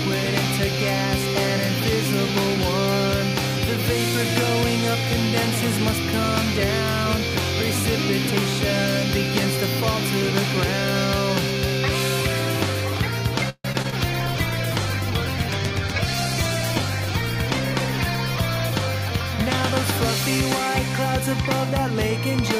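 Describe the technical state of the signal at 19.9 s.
At 19.9 s the signal is inside a call bitrate drop (14.06–21.95 s) from 128 to 12 kbps. Coarser coding that loses the high frequencies makes it rough, watery or muffled, and the quality returns once the bitrate recovers, unlike a fixed filter.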